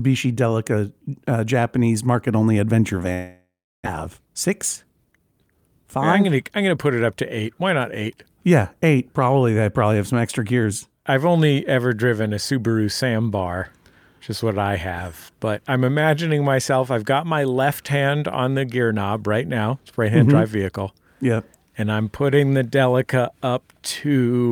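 A speech recording with two connected problems early on. Right after "market only adventure", at 3.13 s, the sound stops being real: the last bit gets stretched into a fading buzzy tail, then it drops to near silence for about 350 ms before speech picks up again at 3.87 s, with roughly 600 ms of content simply gone. That's most likely a long network dropout, where no packets got through and the receiver padded about 720 ms before giving up. Straight after, from 4.09 to 5.19 s, the talker sounds a touch rushed, running about 108% speed while pitch stays put. That's a jitter buffer speed-up. Once the late audio turned up in a bunch, the buffer was sitting around a tenth of a second deeper than it wanted. So it trimmed tiny pitch-period slices over and over, shaving off roughly a tenth of a second to catch back up.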